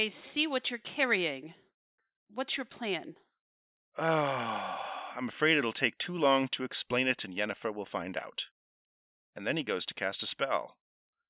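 Nothing in this speech recording stands out as a technical fault, so there's no problem to trace or explain here.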